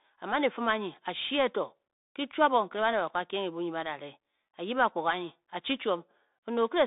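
Throughout, the speech carries Bluetooth CVSD headset codec damage: one-bit delta coding confines the line to about 200 Hz–3.7 kHz, leaving nothing above 3.8 kHz, with scratchy sibilants and granular hiss.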